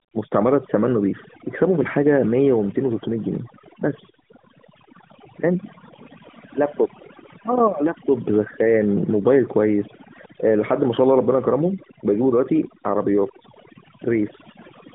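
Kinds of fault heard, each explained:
Overdone noise removal: A noise suppressor set far too aggressively has pulled every frequency band that sits near its noise estimate down to almost nothing. The pauses between phrases fall to near silence, broken only by tiny twinkling specks, and the quieter edges of the speech vanish with the noise. On a spectrogram the background shows as dark gaps scattered with isolated bright dots, and the waveform's pauses flatten to nearly zero.
AMR narrowband mobile codec: The speech has passed through the AMR-NB mobile codec, which rebuilds the voice from a vocal-tract model fed by sparse pulses rather than sending the waveform itself. Its buzzy, somewhat synthetic edge fits a mid-rate mode of about 10 kbps, and the codec damage is plainly audible. The sound is confined to a telephone band of roughly 150 Hz to 3.6 kHz, and a spectrogram shows a hard ceiling with nothing at all above 3.8 kHz.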